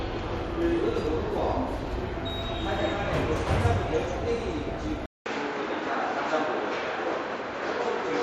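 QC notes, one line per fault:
5.06 to 8.23 s, input switched to a poorer device. A 200 ms silence comes first. The sound then turns dull, with nothing above 7.6 kHz. A new noise floor sits roughly 30 dB below the signal, while the level stays much the same. A change to a narrower-band input is the likely cause.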